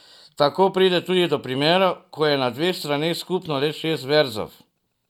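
No faults are audible anywhere in the recording.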